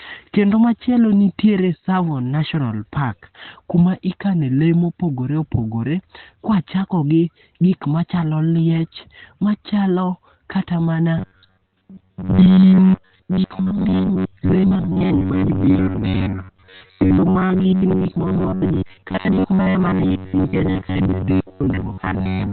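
From the start the speech is muffled and hoarse, with nothing above 4.3 kHz. This heavy band-limiting and rough texture is likely Opus compression in its speech (SILK) mode at a narrowband setting, which fits a bitrate around 12 kbps.

From 11.18 s to 22.52 s the sound becomes a rigid, metallic buzz at 93.8 Hz that loosely tracks the speech. This is robotic sound from repeated short buffers, likely caused by a segment of about 10.7 ms replaying while most of the real audio is skipped.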